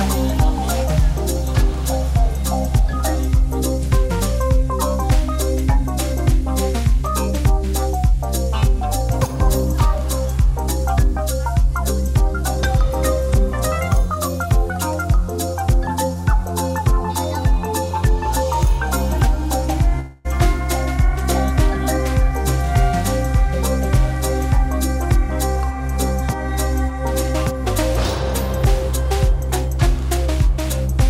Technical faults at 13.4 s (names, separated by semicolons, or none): none